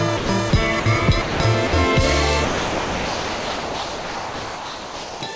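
The music repeatedly gives way to steady, featureless noise at 0.17–0.29 s, 0.50–0.53 s, 0.80–0.86 s, 1.22–1.40 s, 1.67–1.73 s, for a long stretch from 2.45 to 5.21 s, and once more at 5.36 s. This is likely sound dropped by the voice detector, which mistook the music for background and let comfort noise fill in. The audio also carries nothing above 8 kHz, which points to a wideband call codec on the path.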